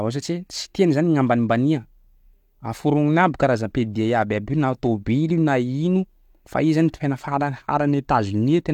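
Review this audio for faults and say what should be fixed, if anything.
Nothing stood out on listening, so there is nothing here that needs fixing.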